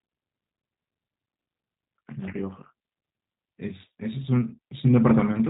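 From start to finish the speech carries G.729 codec damage, and it's plainly audible: the encoder rebuilds each frame from a filter model and a few pulses, which fits an 8 kbit/s stream, so it sounds rough and synthetic, with nothing above 3.8 kHz.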